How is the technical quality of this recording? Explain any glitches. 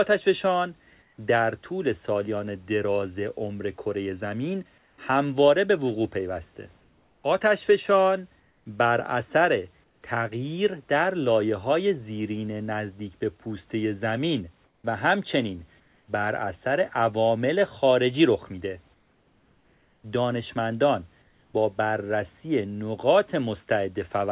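The recording is narrowband call audio with nothing above 4 kHz, and the room background sits about 41 dB below the speech. The glitches are comfort noise in place of the background, heard during pauses at 1.02–1.18 s, 4.78–4.98 s, 6.8–10.02 s, 14.64–16.08 s and 18.94–21.54 s. In those gaps the real room noise gives way to a smooth, featureless hiss, about 1 dB quieter at the first gap and about 4 dB quieter at the second. The likely cause is discontinuous transmission. The sender goes quiet when no speech is detected, and the receiver synthesises shaped noise until speech resumes.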